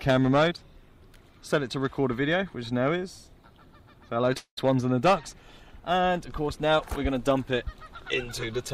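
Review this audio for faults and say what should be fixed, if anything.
At 4.33 to 4.38 s, immediately before the longer gap, there is short concealed packet loss. About 20 ms of audio did not reach the decoder in time, and the receiver filled the hole with about 21 ms of synthesized continuation, extending the preceding sound from its pitch if voiced or as shaped noise if not, then blending back into the real signal. The result is a brief smear at that point. A larger or adaptive jitter buffer, together with forward error correction, would reduce such losses.

From 4.38 to 4.59 s the signal stops being real audio. The preceding sound is carried on as a decaying buzz or hiss, then falls into about 90 ms of silence, and the audio resumes further along without the roughly 200 ms that never arrived. About 195 ms of that stretch is filled by the decaying continuation and silence. The likely cause is a long network dropout: no packets arrived for the whole interval, so the receiver's concealment ran out and faded to nothing. 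Preventing it requires a more stable network path, such as a wired link or prioritized traffic for the stream, because concealment cannot rebuild a gap of this length.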